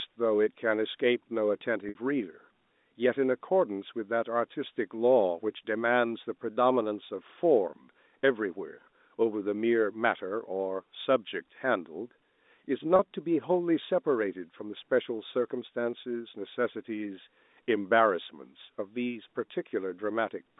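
At 1.89 to 1.95 s and again at 12.96 to 12.99 s there's packet loss with pitch repetition. Audio drops out, and the last pitch period gets replayed to fill the gap, giving a brief held, buzzy smear over the narrow telephone-band G.711 sound.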